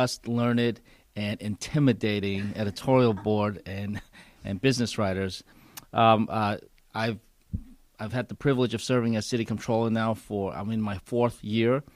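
Nothing stood out on listening to this clip.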